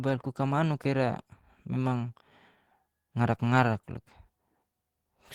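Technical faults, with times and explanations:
Nothing technical stands out in this bit of speech; there's no fault to flag here.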